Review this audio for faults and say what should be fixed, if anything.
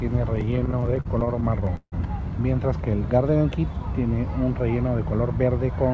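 Repeated stalls (stutter) run from 0.36 to 1.95 s: about 25 short gaps where the jitter buffer ran dry because packets arrived late or slower than playout, and the receiver stretched the last sound to cover each one. The longest is 160 ms, roughly 440 ms in total is filled in, and that fill makes up 28% of the span. Nothing is lost, but the audio drags. The band ends at 8 kHz, as expected from the G.722 call path. To prevent the stalls, fix the network delay variation or raise the jitter buffer's target depth.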